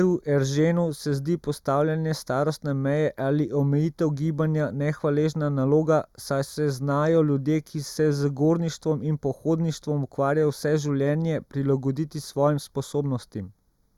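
Throughout the speech, channel delay (comb filtering) gives a hollow, phasey tone. One channel arrives roughly 0.2 ms late, so the mono sum cancels at evenly spaced frequencies starting near 3 kHz. Unlike flanging, these notches stay fixed instead of sweeping.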